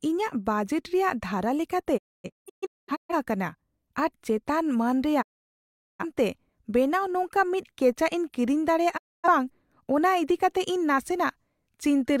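At 1.96 to 3.14 s the speech breaks into several short holes, about 0.85 s lost in all, longest 256 ms. That's a digital broadcast dropout: the receiver stops getting good frames and mutes with a quick 20 ms fade. It happens again at 5.21 to 6.05 s and 8.96 to 9.28 s.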